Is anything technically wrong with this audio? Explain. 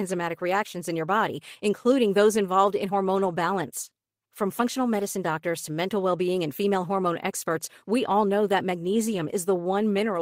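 No, the signal shows no technical faults anywhere in the recording.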